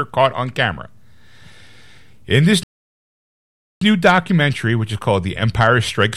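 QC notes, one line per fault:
2.63–3.81 s playback stall: speech halts mid-flow for 1.18 s, likely the player starved of data, resuming at "new documentary which is"; flatline waveform, blank spectrogram gap.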